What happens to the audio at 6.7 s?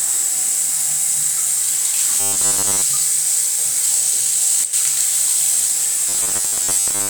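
Audio likely arrived too seldom here, so the playback kept repeating its last 10 ms buffer while fresh material was skipped. From 6.09 to 7.10 s this robotic sound from repeated short buffers imposes a rigid, metallic 100 Hz buzz over most of the sound.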